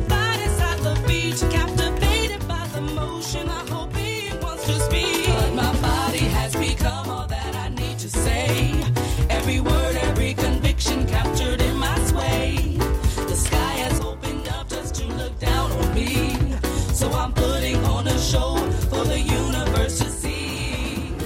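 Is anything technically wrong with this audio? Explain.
Yes. From 2.28 to 4.68 s, 6.90 to 8.16 s, 13.98 to 15.47 s and 20.03 s to the end, the level abruptly drops by about 6 dB, likely because one channel drops out and halves the mono sum. The waveform shows flat-edged steps down, and the spectrogram dims across all frequencies.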